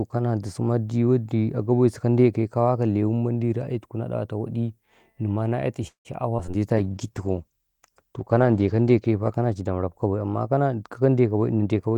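From 5.87 to 6.55 s the speech breaks up with repeated packet loss, which gives it a robotic sound. Four gaps occur close together, the longest about 175 ms. About 208 ms is patched by stretching the preceding sound, leaving a choppy texture, and another 120 ms is simply missing, so about 31% of that span is concealed.

A jitter buffer slow-down follows at 6.59 to 7.14 s. To rebuild its reserve, the receiver repeats short stretches of the waveform, inserting about 74 ms. The speech plays at 88% speed with unchanged pitch, so syllables sound drawn out.

Overlapping this, a call bitrate drop begins at 6.76 s and lasts until 10.42 s. The coarser coding points to a fall from about 40 kbps to 14 kbps, held at the lowest rate for about 2 s. The encoder has fewer bits per frame, so the speech turns rough and watery until quality returns.

From 11.36 to 11.96 s a jitter buffer speed-up trims excess delay by removing small pitch-period-length pieces, about 70 ms in total. 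Playback runs at 110% speed at the same pitch, so the closing speech sounds hurried.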